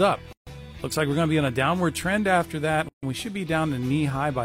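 Right at 0.33 s the sound just drops out, a gap of about 141 ms until 0.47 s, then picks up exactly where it left off. That's a gap at a join of encoded pieces: two separately encoded chunks butted together with the encoder's start delay and end-frame padding left in. The edges are smeared by the codec. Same thing again from 2.89 s to 3.03 s, about 143 ms this time.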